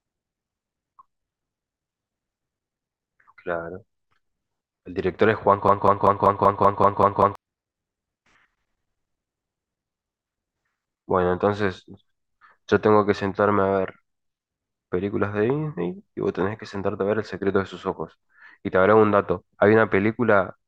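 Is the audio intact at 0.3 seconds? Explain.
Yes, the audio is intact at 0.3 seconds, with no fault at that moment.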